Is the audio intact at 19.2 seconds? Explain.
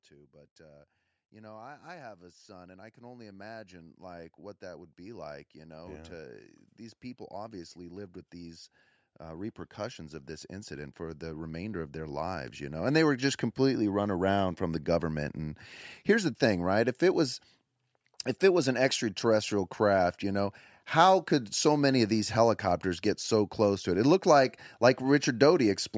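Yes, the speech at 19.2 s is intact, with only the ordinary call microphone processing audible there: its high-pass filter trims the lowest bass and nothing reaches above 8 kHz, as expected for that path.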